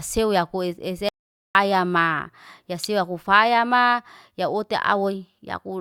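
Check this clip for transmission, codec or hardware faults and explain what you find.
Two faults are present in this speech clip.

From 1.09 to 1.55 s there is an audio dropout to silence. The input was likely lost while writing continued, leaving 0.46 s of dead silence before "ma ya".

At 2.84 s an electrical switching spike appears between "ma ya" and "ya kufaya ma ya". A nearby arc, likely picked up by the line, adds a sharp snap over the speech.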